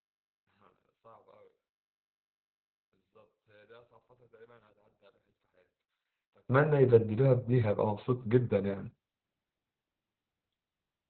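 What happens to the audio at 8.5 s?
At 8.5 s you're hearing the same Opus voice compression that runs through the whole clip. Nothing gets through above about 4.4 kHz, so the speech is squeezed into a narrowband channel and sounds muffled, hoarse and a bit robotic. The linear-prediction coder is rationing bits so tightly that the excitation comes out rough, which fits a bitrate down around 8 kbps. The damage is heavy.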